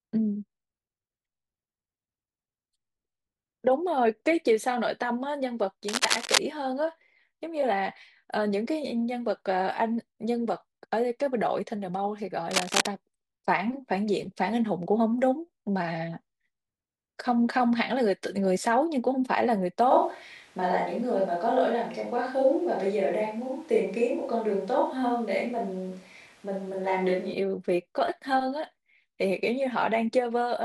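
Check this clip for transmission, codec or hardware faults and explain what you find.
Two problems show up, both hardware-side rather than codec. At 5.88 to 6.39 s and 12.51 to 12.86 s there's cable scratch noise: rough, uneven crackle about as loud as the speech itself, most likely a worn connector shifting its contact. From 19.91 to 27.34 s it sounds like a switch to a distant microphone. The speech abruptly goes hollow and roomy with thinner low end and room noise around 30 dB down, though the level barely changes, then snaps back.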